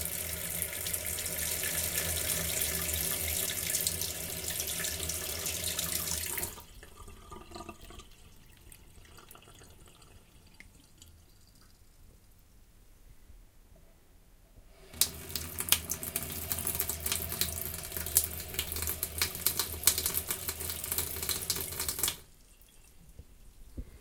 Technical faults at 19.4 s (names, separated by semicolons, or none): none